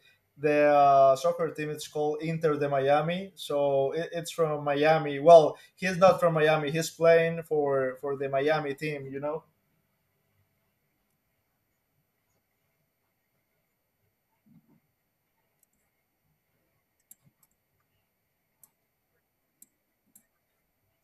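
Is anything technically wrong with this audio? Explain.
No, nothing in this speech recording stands out as a technical problem. There is nothing here that needs a technical explanation.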